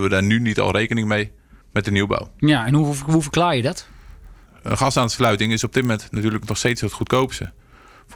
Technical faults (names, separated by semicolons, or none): block size mismatch (padded)